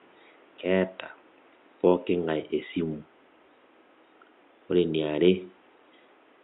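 Nothing in the speech recording points to a technical fault, and the only thing under the voice is the room's own background noise, sitting about 33 dB below the speech.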